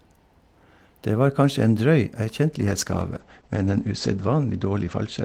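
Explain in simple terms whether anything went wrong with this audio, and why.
From about 2.6 s until the end, the speech turns duller and rough, as if the crisp top had been shaved off. This is a call bitrate drop: the connection had less room, so the speech was squeezed harder and its highest sounds were discarded.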